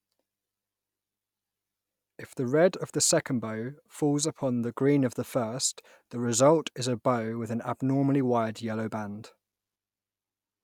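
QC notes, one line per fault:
No faults were found in this speech clip. Nothing in the audio needs a timed entry.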